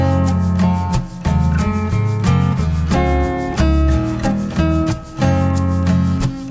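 Throughout the audio, a wrong sample rate makes everything run at about 0.73 times normal speed and sit about 5.6 semitones low, which fits 22 kHz material played back at 16 kHz. Because tempo and pitch drop together, this is not a pitch shift or a time-stretch.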